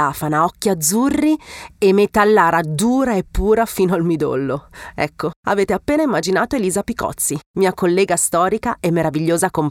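Nothing in the recording stood out as a technical problem on listening.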